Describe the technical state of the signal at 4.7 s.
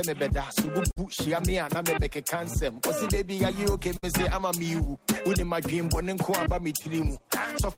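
At 4.7 s the signal is inside a run of repeated timing corrections that lasts from 0.89 s to 7.30 s. The receiver keeps inserting short repeated slivers of audio to cover for a source that delivers samples too slowly, so playback runs at about 97 percent speed and the stretch gains around a fifth of a second overall. Each insertion is tiny, so at this point it comes across, if at all, as a faint hiccup or a slightly dragging, unsteady pace.

Underneath this is clock drift between sender and receiver, present across the whole clip. The sending clock runs roughly 5 percent slow against the receiving one, so the jitter buffer keeps draining and has to be topped up by those repeats, at uneven intervals, all pushing in the same direction. The audible result near 4.7 s, if any, is a sound that seems to lose its footing slightly, with small irregular stumbles in its timing rather than any steady distortion.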